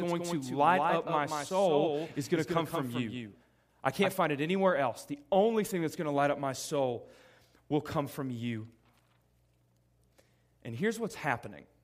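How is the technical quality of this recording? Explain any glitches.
The recording has one clear glitch at the start. From the very beginning until 4.12 s, the speech sounds doubled: a second, somewhat quieter copy trails the original by roughly a fifth of a second, then cuts off abruptly. This doubled audio track most likely comes from the same signal being captured twice, once through a slower path, with no room colour on the echo.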